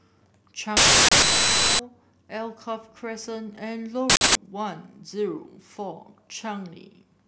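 Uninitialised buffer at 0.77 to 1.79 s and again at 4.10 to 4.35 s: blocks were played before any audio was written, so stale memory came out as harsh, loud digital noise lasting 1.02 s, then 0.26 s, fitting 16384- and 4096-sample blocks.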